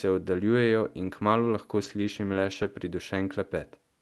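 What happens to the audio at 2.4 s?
Just after "oddaljujejo in kmalu lahko", three lost packets were rebuilt from error correction, at 2.33–2.35, 2.37–2.39 and 2.43–2.45 s. Each 20 ms frame came from a low-bitrate copy in the next packet. There is no gap, but those frames sound rougher and noisier.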